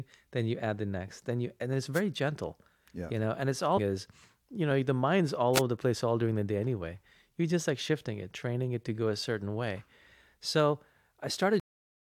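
At 1.93 to 2.01 s, between "then you and it's" and "gentle yeah you know", and again at 5.54 to 5.61 s, after "know the mind's all", a wireless microphone noise hit appears as a brief static swish from a fading FM signal, a broadband smear on the spectrogram. At 3.76 to 3.79 s, after "you know and it's", damaged data in a compressed stream makes the decoder lose sync, giving a short glitch and a vertical blip. At 11.60 s a cut-off end drops the sound mid-sound to flat digital silence, a waveform ending abruptly with no decay.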